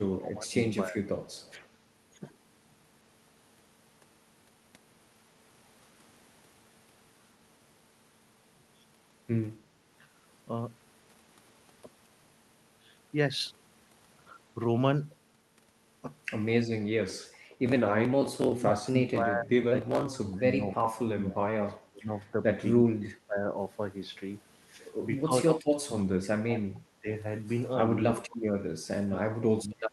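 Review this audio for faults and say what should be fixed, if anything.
Speech suppressed in double talk shows up four times: 0.11–0.97 s, 18.36–23.48 s, 25.23–27.08 s and 27.87–29.92 s. The talker keeps dipping, by about 20 dB in the first stretch and about 25 to 30 dB in the later ones. Around four seconds of the 18.36 s stretch gets eaten. The likely cause is an echo canceller that can't tell local speech from far-end echo, so it squashes both. A better double-talk detector, or a less aggressive suppressor, would prevent it.

There's also an echo leak from 1.27 to 1.67 s. You can hear a faint delayed copy of the voice trailing about 273 ms behind, sitting roughly 35 dB under the speech. That's most likely loudspeaker pickup on one end that the canceller didn't fully remove, so a scrap of it got sent back. Tightening the echo canceller's convergence, or getting the far end onto a headset, would stop it.

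Background gated by the echo canceller happens at 17.39–17.51 s. The room tone drops by about 10 dB for roughly a tenth of a second, then comes straight back. The canceller clamped the mic while the loudspeaker was active and then released it. The call path itself sounds like Opus at a modest bitrate, topping out around 12 kHz, and that part is fine. Adding comfort noise, or using a gentler suppression floor, would smooth this gap over.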